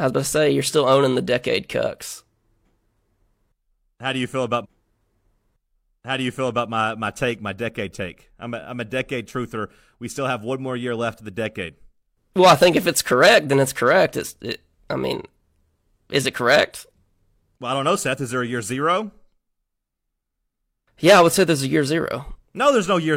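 At 4.60 s, right after "do you feel", the speech jumps back and about 2.04 s of it plays a second time, with a small blip at the seam, before carrying on into "my my take my" at 6.64 s. This is a stream segment repeated fault: the player fetched or queued the same chunk of the stream twice, so that stretch of the programme is heard again and the clip runs about 2.04 s longer.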